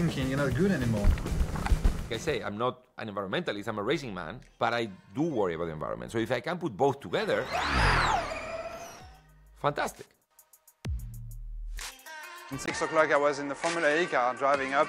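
Right at 12.66 s the audio drops out for about 20 ms, and from there to the end the sound goes duller, with nothing above 10.4 kHz where there was top end before. A faint new background noise comes in, sitting well below the signal, while the level stays about where it was. That pattern, a brief gap followed by a narrower band and a different noise floor, points to a likely input switched to a poorer device partway through the recording.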